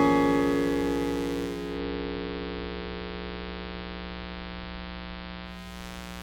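Mains buzz runs through the whole clip: a steady, raspy buzz built on 60 Hz harmonics, sitting roughly 10 dB below the sound. Switching spikes from a dimmer, rectifier or unshielded line get in twice per mains cycle, spreading harmonics up into the kilohertz range.

Digital radio blending to analogue starts at 1.42 s, when a hybrid receiver loses its digital stream and cross-fades over about 0.41 s to the station's AM broadcast, then blends back by 5.84 s. Between those points, hiss comes up around 30 dB below the sound, though the level stays the same.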